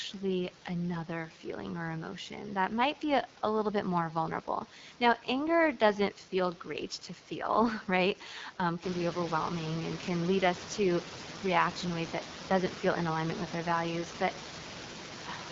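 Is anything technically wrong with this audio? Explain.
Yes. Throughout the speech, the AMR wideband (HD Voice) codec at 8.85 kbit/s builds the voice from a pulse-driven vocal tract model, so it sounds rough and raspy. A spectrogram would show smeared harmonics, a noise-filled 6.4 to 7 kHz band, and nothing above. The room noise that rises by about 13 dB around 9 s is part of the recording itself.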